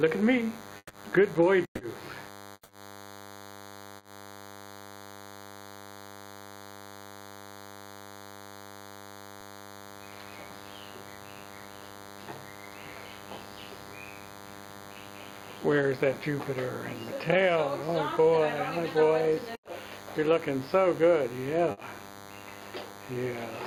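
A thin, steady buzz at 100 Hz, rich in harmonics, runs under the whole clip at roughly 20 dB below the signal. This is DECT cordless phone buzz. A DECT handset or base station nearby transmits a short radio burst every 10 ms, and the audio circuitry rectifies those bursts, so the 100 Hz repetition rate becomes an audible tone with a comb of overtones above it.

At 0.77 to 0.91 s, and again at 1.65 to 1.81 s, the sound suddenly stops being fresh. It turns into a held continuation of the last moment that fades away, leaving about 40 ms of silence in the first gap and about 80 ms in the second. The audio then picks up later in the stream. These are bursts of packet loss. Packets failed to arrive in time, and the receiver bridged 120 ms and 140 ms respectively by extending the last sound while turning it down. The material in between is simply missing.

From 2.53 to 2.71 s the same pattern returns at greater length. 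About 160 ms of sound is gone: a fading continuation is followed by roughly 40 ms of silence before the audio resumes further on. This is likely a long network dropout, a stretch in which nothing arrived, so the receiver's extension ran out and left a gap.

At 3.97 to 4.03 s there is a brief smear lasting about 40 ms, where the sound wobbles and then blends back in. This is short concealed packet loss. A few hundredths of a second never reached the decoder, and the receiver filled the hole by continuing the preceding sound before crossfading into the real audio again.

Two further bursts of packet loss come late in the clip, at 19.55 to 19.65 s and 21.71 to 21.79 s. Each is heard as a short held, fading stretch, with 80 ms and 60 ms of audio lost respectively, and the sound resumes a little further on.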